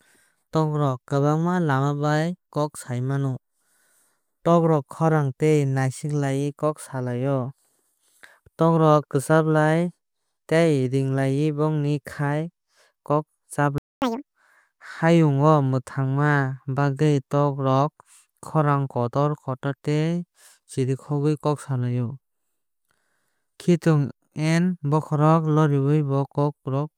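Speech runs into a playback stall from 13.78 to 14.02 s, a gap of about 0.24 s, likely caused by the player running dry or its thread being blocked, seen as a flat waveform and an empty spectrogram band. A catch-up at higher speed follows from 14.02 to 14.26 s, playing at 2x with pitch raised roughly ten semitones, so harmonics visibly shift upward and compress in time.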